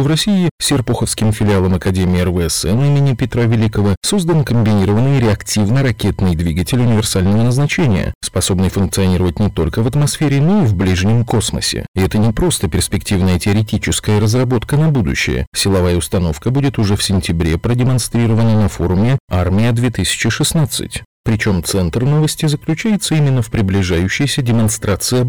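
From start to finish the speech suffers hard clipping. The signal is driven about 14 dB beyond what the chain can pass. Every peak is sliced flat at the ceiling, and roughly a fifth of the samples sit on that limit. Those squared-off tops create harmonics far above the original content. With overload this large, it is not just crackle on the loudest moments. A harsh fuzz rides on every loud syllable.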